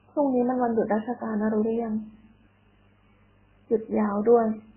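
From start to finish, the speech has nothing above 3.1 kHz, so it sounds dull and boxed in. Several kinds of damage are heard together. The likely cause is transcoding between lossy codecs. A very low-rate first encode, which fits an MP3 around 8 kbit/s, set the cut-off. Later passes, pointing to Opus and then WMA, spent bits on those flaws and added their own.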